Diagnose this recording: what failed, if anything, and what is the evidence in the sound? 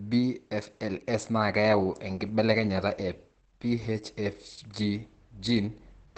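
The codec's the culprit: heavy Opus voice compression running the SILK coder throughout. The speech is muffled and hoarse with a slightly robotic edge, and there's nothing above about 8.6 kHz. That fits wideband SILK at roughly 10 kbps, coding the excitation coarsely.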